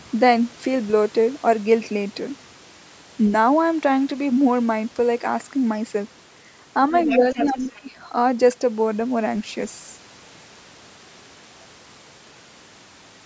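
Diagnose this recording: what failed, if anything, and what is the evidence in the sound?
Call processing failed at the echo canceller. From 6.9 to 7.66 s, a second, fainter voice sits under the talker, roughly 10 dB down. That is the other side's voice leaking through. The likely cause is loudspeaker echo the canceller left in the microphone signal.

The same stage shows speech suppressed in double talk. Between 7.18 and 7.88 s, starting while that far voice is present, the talker's level drops by up to about 20 dB, in pieces totalling about half a second. The canceller likely could not separate the talker from the loudspeaker echo and turned both down.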